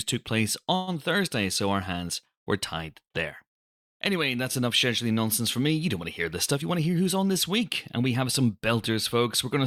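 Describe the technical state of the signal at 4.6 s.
At 4.6 s the signal is intact, with no dropout, distortion or other fault to be heard at that moment.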